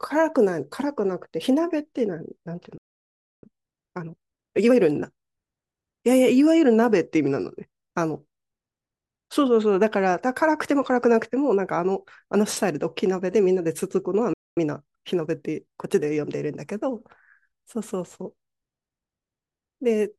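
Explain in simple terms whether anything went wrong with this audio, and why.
The speech cuts out twice. At 2.78 s it goes silent for about 0.65 s, picking up again at 3.43 s, and at 14.33 s it drops out for about 0.23 s, returning at 14.57 s. This is a playback stall. The likely cause is that the player briefly ran short of incoming audio, or was held up doing something else, so it had nothing to send to the speakers until it recovered.

Right after each gap the speech sounds hurried but not higher-pitched. That is time-compressed catch-up. To make up the lost time, the player trims tiny slices out of the audio and blends the edges together. From 3.43 s to 4.73 s it runs about 1.5 times normal speed. From 14.57 s to 16.89 s it runs only about 1.1 times normal speed, a gentler rush.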